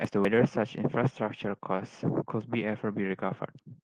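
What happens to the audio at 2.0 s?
Nothing goes wrong at 2.0 s: the speech there is intact, carried through the Opus call path at its normal band limit of about 12 kHz, with no dropout, glitch or distortion at that moment.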